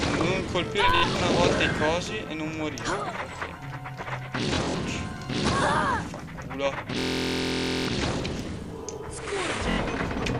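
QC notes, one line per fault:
throughout: filter restarted on every block. The filter loses its memory at each block boundary and starts again from silence, so every block opens with a small transient. These ticks fall at a steady 93.8 Hz, which fits a 512-sample buffer, and merge into a low buzz that rises and falls with the level of the sound. On a waveform, small regular kinks mark each block edge. On a spectrogram, faint vertical lines appear at even spacing, with a harmonic comb from 93.8 Hz upward that is strongest in loud passages.
0.95–1.21 s, 4.55–4.80 s, 6.99–7.89 s, 9.71–9.80 s: Bluetooth stutter. Audio arrived late or not at all, and the receiver repeated its last short slice until new data came, which gives a machine-gun buzz. In the first two bursts, about 116 ms goes missing across roughly 232 ms, with runs of 70 ms and 46 ms. The third burst is the longest, with about 880 ms replaced. 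The last burst replaces 70 ms. Afterwards the sound resumes further on, as if it had kept playing. On a waveform, identical short cycles repeat. On a spectrogram, the spectrum freezes into vertical striping, then jumps at the resume point.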